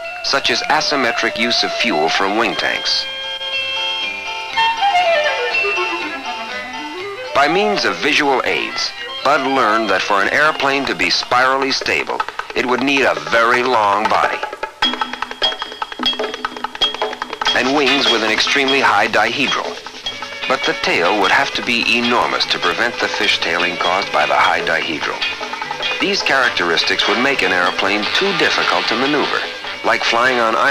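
From 21.22 to 23.21 s, a few small ticks recur every 0.5 s, each a brief gap of silence around a millisecond long: periodic USB or driver dropouts.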